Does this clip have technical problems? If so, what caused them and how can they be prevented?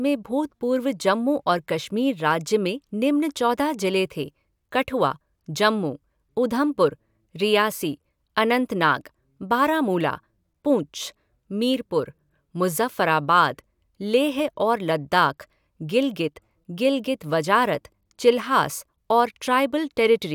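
No, there's nothing technical to flag in this speech recording, so there's no cause to track down and nothing that needs preventing.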